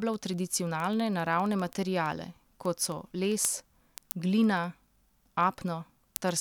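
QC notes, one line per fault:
0.14–6.36 s, word clock ticks: a steady train of roughly a hundred ticks, about one every 70 ms, runs under the speech. The receiving device is clocking the digital link from its own oscillator rather than locking to the sender. Their rates differ by a few hundred parts per million, so the two clocks slip past each other at that regular interval. At each slip a single sample is dropped or repeated, and that one-sample discontinuity is what clicks.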